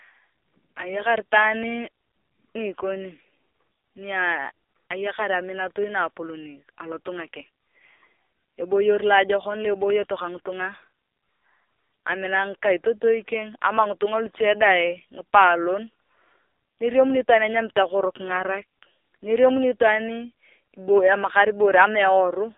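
From start to finish the speech has been through the AMR narrowband mobile codec. Everything sits between 300 Hz and 3.7 kHz, and heavy coding damage leaves the voice buzzy and synthetic, which fits a low-rate mode around 5.9 kbps.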